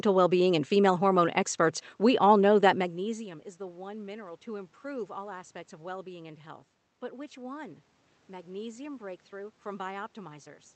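Nothing here counts as a fault: the room's background noise and the talker shifting relative to the microphone at around two and a half seconds both belong to the recording, and the call path's Opus coding, with its top end stopping near 8 kHz, is working as intended.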